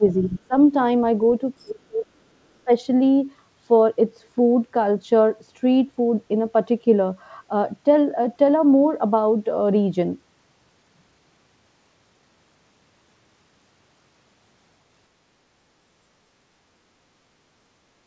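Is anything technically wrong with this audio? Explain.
Yes. There are two problems, both in the first three seconds.

Speech suppressed in double talk occurs from 0.0 to 0.55 s, 1.59 to 2.06 s, and 2.64 to 2.71 s. The level dips sharply, by as much as about 35 dB during 1.59 to 2.06 s. This is likely an echo canceller turning everything down while both sides talked at once.

The other side's voice leaks through from 1.59 to 1.65 s. A faint second voice surfaces very briefly, about 35 dB below the speech. The echo canceller likely failed to remove all of the loudspeaker playback from the microphone.

The call codec cuts everything above 8 kHz. That fits G.722 at 64 kbps.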